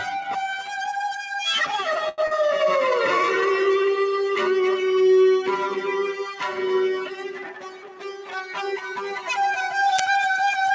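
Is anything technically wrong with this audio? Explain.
Yes. Several faults are present, starting with a speech-tuned noise suppressor left running on non-speech audio. The G.722 call path also shows, as nothing appears above 8 kHz.

Noise suppressor applied to music or sounds: Throughout, the suppressor treats sustained content and tails as noise, so the gain swings by roughly 15 dB. The sound pumps and thins. On a spectrogram, attacks stay bright while held energy fades in patches. The waveform envelope breathes unevenly.

Sound cut by the noise suppressor: The suppressor pulled these stretches down harder than their surroundings: 0.00–0.32 s (about 6 dB), 0.54–0.93 s (about 8 dB), 1.09–1.37 s (about 7 dB), 6.13–6.59 s (about 10 dB) and 6.98–9.28 s (about 14 dB). Steady and decaying parts sink or are truncated. They appear as darkened bands and collapsed waveform tails.

Short stall from a late packet: From 2.09 to 2.21 s a packet arrived late, the jitter buffer emptied, and the receiver stretched the previous sound for 90 ms before resuming. 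Nothing is lost, but one sound hangs too long with a slight buzz or dip. It shows as a smeared, repeated spectral slice.

Short concealed packet loss: At 2.27–2.34 s, 30 ms of audio never arrived, and concealment extrapolated the last sound before crossfading back. It is heard as a brief smear or wobble. A spectrogram shows a blurred, slightly mismatched patch.

Jitter buffer speed-up: From 7.44 to 8.37 s the receiver trimmed excess buffered audio by removing short pitch-period chunks. Playback runs about 7% fast at unchanged pitch, cutting around 70 ms, so the timing feels hurried. Events compress horizontally without any spectral shift.

Uninitialised buffer: At 9.99 s, a roughly 10 ms block of stale memory was played as audio, producing a sharp, loud digital burst. It shows as a tall rectangular spike in the waveform and a bright broadband vertical stripe on the spectrogram, possibly with tonal lines.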